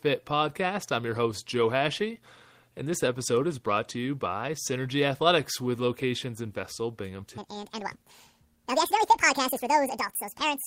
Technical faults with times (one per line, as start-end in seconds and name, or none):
7.38-10.67 section at the wrong speed